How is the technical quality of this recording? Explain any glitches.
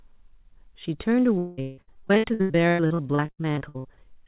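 The main problem is a long run of repeated packet loss from about 1.38 s to 4.09 s, heard over narrowband call audio with nothing above 4 kHz, which fits a G.711-style telephone codec.

That stretch is repeated packet loss with the typical robotic sound. Nearly thirty separate holes open up, the longest about 193 ms. Each one gets patched by stretching out the last bit of sound, so about half the span is concealment. Around 1.4 s of real speech is simply missing, and what's left sounds choppy.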